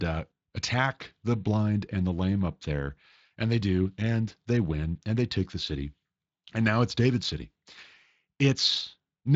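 No technical faults are audible.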